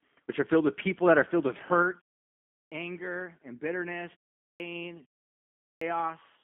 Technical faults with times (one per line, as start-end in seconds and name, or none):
0.00-6.43 G.729 codec
2.58-2.72 clipped start after a pause
4.45-4.60 clipped start after a pause
5.66-5.81 clipped start after a pause